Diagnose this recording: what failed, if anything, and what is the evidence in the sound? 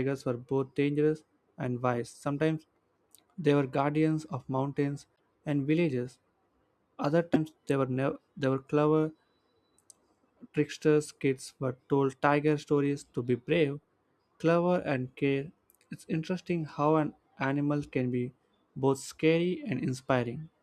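The speech jumps abruptly twice: at 5.15 s, between "were guardians of mountains" and "and villages", and at 7.33 to 7.36 s, just before "they were". On a waveform each shows as a sharp discontinuity, and on a spectrogram as a vertical seam in the harmonics. The likely cause is a broken MP3 bit reservoir at the codec stage. After frames were lost, the next frame borrowed bytes from the wrong neighbour, consistent with 24 ms frames.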